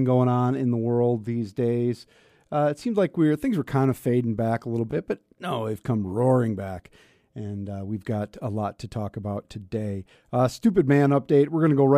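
A speech clip with a Bluetooth stutter between 4.91 and 4.95 s. A short slice of about 15 ms of audio is replayed, which fits a single packet that was lost or late, so the receiver repeated its last buffer instead of leaving a gap. The speech then resumes further on, as though it had kept playing. On a waveform the repeated slice appears as an identical copied segment; on a spectrogram it shows as a brief vertical seam where the frame pattern repeats.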